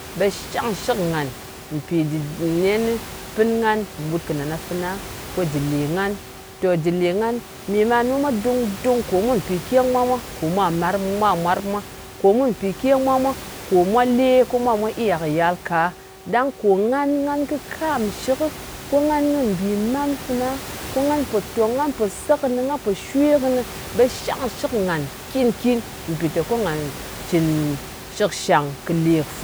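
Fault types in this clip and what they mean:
Nothing stood out on listening to this speech clip.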